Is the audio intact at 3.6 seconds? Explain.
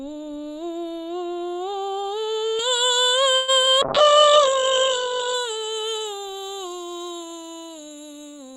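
No. At 3.6 seconds the music is under pre-emphasis left on, which runs from 2.59 s to the end. The treble was boosted for recording or transmission and the matching cut never came. Around 10 kHz the highs sit about 11 dB above 1 kHz, which fits the J.17 curve. The music sounds thin, bright and edgy.

Just before, from 3.35 to 3.50 s, there is a call audio freeze. The last sound is stretched into a fading buzz for 126 ms, with no silence. The likely cause is packets held up in transit while the jitter buffer ran dry. Nothing is lost. The music resumes where it stopped, 126 ms late.

Just after, from 3.62 to 3.68 s, comes short concealed packet loss in two back-to-back holes. From 3.62 to 3.65 s, 20 ms of music is missing and about 12 ms of synthesized continuation fills the gap. From 3.65 to 3.68 s, 40 ms is missing with about 8 ms filled. The dropped stretch lets the stream catch up by roughly 30 ms. 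It sounds like a quick smear or wobble in the music.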